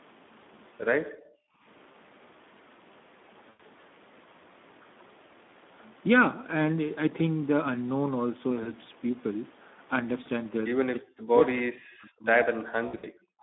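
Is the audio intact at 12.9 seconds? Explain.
No. VoIP packet loss concealed by the speech codec runs from 12.87 to 13.07 s. Audio went missing in bursts, about 120 ms in all across 160 ms with the longest gap 60 ms, which fits six lost 20 ms frames. The decoder filled the gaps by extending its last pitch and filter at falling gain, so the sound turns into a buzzy tone or coloured noise that fades, and stays weak for a moment after the stream resumes.

Speech suppressed in double talk spans 12.58 to 13.42 s, likely because both sides spoke at once and the echo canceller turned the near talker down along with the echo. The voice dips by as much as about 40 dB over roughly a second.

The Speex codec at 11 kbps affects the whole clip, including this moment. With so few bits for the excitation, speech sounds plainly hoarse and noisy, and the line band of 200 Hz to 3.6 kHz leaves a narrow, telephone-like sound.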